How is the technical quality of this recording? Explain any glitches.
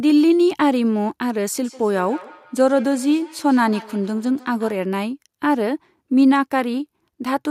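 The recording has one clear problem, a feedback echo between two devices from 1.64 to 4.88 s. A second device in the same room seems to be on the call, playing this speech back out, where this microphone catches it again. Each echo canceller only removes its own device's playback, so the loop survives. The speech returns at a fixed spacing of roughly 150 ms, peaking about 21 dB below the direct speech, as a faint, hollow repeat trailing each phrase.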